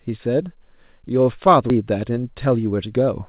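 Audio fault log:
1.70–1.72 s, skip ahead: The speech jumps abruptly forward with no gap, as if about 0.7 s of audio had vanished and the two sides were spliced together. A stretch was dropped in transit or by an overflowing jitter buffer while later audio waited.
1.81–3.23 s, jitter buffer speed-up: From here the speech sounds hurried, running at about 111% speed while keeping its pitch. The receiver was trimming a backlog by repeatedly cutting out pitch-period-sized slivers, removing roughly 150 ms in total to bring the delay back down.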